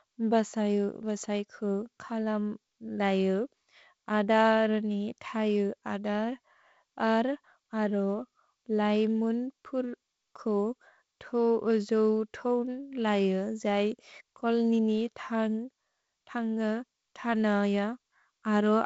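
The speech recording has no technical faults. It has passed through G.722 wideband telephone coding at 48 kbit/s, so nothing is heard above 7.7 kHz, the coding leaves a light hiss in the upper band, and the reduced bit rate leaves a slightly grainier lower band.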